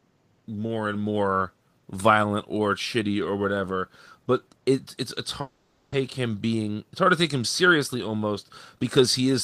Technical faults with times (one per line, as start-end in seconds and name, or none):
5.41-5.94 long network dropout
7.94-9.23 jitter buffer speed-up